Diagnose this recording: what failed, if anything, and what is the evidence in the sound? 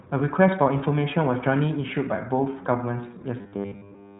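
Codec stage: iLBC codec throughout. Nothing passes above 3.8 kHz. Independently coded 20 ms frames leave the speech plainly rough and synthetic, which fits 15.2 kbps.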